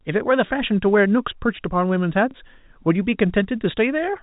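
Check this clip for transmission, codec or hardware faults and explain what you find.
One transmission fault is audible in the speech. From 2.31 to 2.34 s there is packet loss with the last packet repeated. 30 ms of audio is missing, which fits a single lost packet. The receiver filled the gap by playing the previous packet again. It comes across as a small blip. The cut above 4 kHz comes from the G.711 telephone coding in the path.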